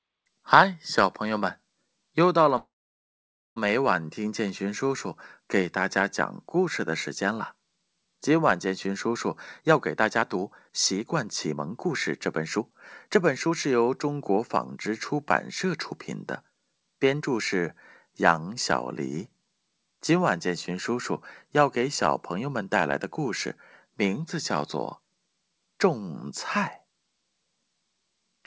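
At 2.58 s the speech stops and a gap of about one second opens, lasting until 3.58 s. For most of it, roughly 0.89 s, there is silence, after a brief tail where the last sound carries on and fades. The speech then resumes from where it broke off with nothing skipped, now running about a second later than before. This is a call audio freeze, likely caused by packets held up in transit so that the jitter buffer ran dry and the receiver had to fill the wait.

From 9.29 s to 15.93 s the speech plays at about 113% of its normal rate with the pitch unchanged, so it sounds hurried. In total, something like a second of audio is trimmed away. A second, shorter stretch from 16.43 s to 17.22 s runs at about 111%, with roughly a tenth of a second removed. Both are jitter buffer speed-up. The buffer had built up more delay than it targets, probably from the extra second added by the earlier freeze. 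To shed that excess, the receiver repeatedly cut out short pieces one or a few pitch periods long. Throughout the clip, the G.722 call path leaves nothing above 8 kHz.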